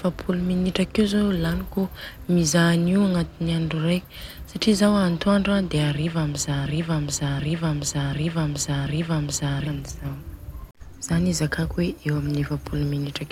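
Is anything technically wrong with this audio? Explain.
Yes, there's a broken-record loop from 6.66 to 9.67 s. A 0.74 s stretch of speech plays four times back to back, identical each pass, and the audio meant for those three seconds is gone. Likely a stalled player or stream resending its last fragment.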